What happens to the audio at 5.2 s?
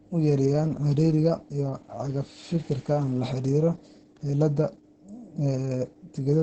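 At 5.2 s, like everywhere else in the clip, you're hearing heavy Opus voice compression: a coarsely coded SILK excitation, nothing above 8.6 kHz, consistent with roughly 10 kbps, so the speech sounds muffled, hoarse and slightly robotic.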